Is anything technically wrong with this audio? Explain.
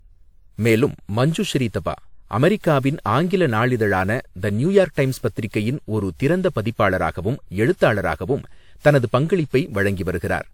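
Yes. Throughout the speech there is generation loss: the audio was likely decoded and re-encoded around seven times, in a way that fits WMA at 128 kbit/s. Each pass requantises on a shifted frame grid, so noise and spectral holes pile up. The result sounds swirly, hollow and smeared, attacks blur, and nothing remains above 19.4 kHz.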